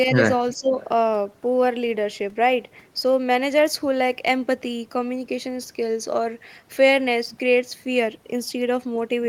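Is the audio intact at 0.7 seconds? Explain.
No. From 0.54 to 0.75 s the speech is suppressed in double talk: the level dips by about 15 dB, likely because an echo canceller mistook this side's overlapping speech for loudspeaker echo. The waveform shows a sudden narrowing.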